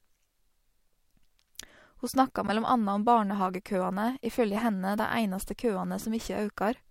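At 2.47 to 2.50 s there is a corrupt frame decoded. Flipped bits in one compressed block were played out anyway. Misread gains and codes put energy in the wrong bands, and a short glitch cuts across the speech. At 4.98 s the same fault returns. This time the damage seems to spread over a couple of frames, so the glitch sounds longer. It is a brief glitch of misplaced energy.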